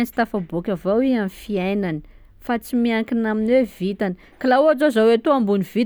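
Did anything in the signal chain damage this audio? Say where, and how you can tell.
No, nothing along the chain from capture to playback seems to have left a mark on this speech recording, so there's no stage to point at here.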